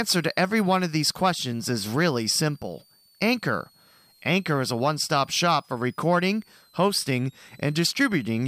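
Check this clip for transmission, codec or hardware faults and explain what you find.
A hardware fault is present in this speech. Switching supply whistle runs throughout: a supply in audible burst mode leaves a faint whistle wandering between 3.7 and 5.0 kHz, roughly 35 dB down, seen as a thin drifting line on the spectrogram.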